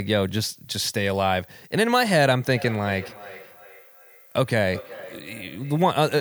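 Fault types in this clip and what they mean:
Feedback echo between two devices: a second device replays this microphone's signal, which the canceller cannot remove, so from 2.55 s each sound recurs roughly 0.4 s later, about 18 dB down. Spectrograms show faint, thinner trailing copies; the waveform shows small envelopes in gaps.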